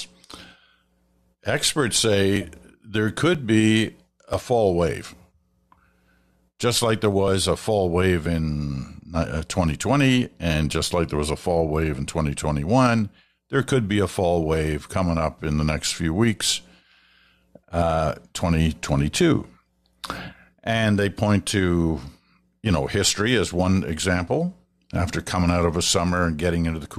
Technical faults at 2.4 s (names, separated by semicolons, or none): overlap between stream segments